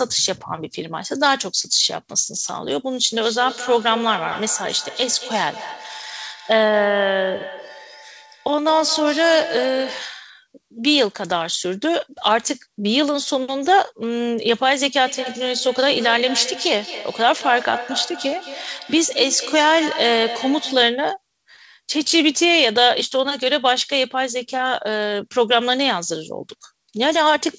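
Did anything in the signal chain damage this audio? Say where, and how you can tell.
Yes. From 3.13 to 10.2 s and again from 15.06 to 20.99 s, the speech comes back as thin, ringing repeats spaced about a fifth of a second apart, peaking about 13 dB and 12 dB below the speech. That is feedback echo between two devices in the call-processing stage: a second device in the room replays this feed into the open microphone, beyond the reach of its echo canceller, so each pass loops around again.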